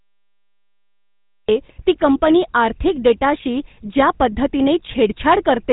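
Cut-off start at 1.49 s: the speech recording opens with digital silence until 1.49 s, then the sound jumps in mid-utterance with no attack or fade. Capture or streaming evidently began after the talker had already started. GSM full-rate codec damage runs throughout. The speech has a plainly audible buzzy, gravelly roughness and nothing above 4 kHz, which fits the 13 kbps full-rate coder. It rebuilds the voice from a vocal-tract model excited by sparse, regularly spaced pulses, discarding most of the real excitation detail.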